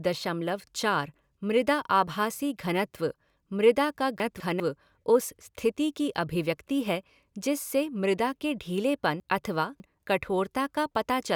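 At 4.2–4.6 s, after "घनत्व मृदा का", and 9.2–10.0 s, after "के ढीलेपन", chunks play out of order: a 200 ms block arrives one, then three, chunks late, giving jumbled sound and abrupt waveform and spectrogram breaks at each join.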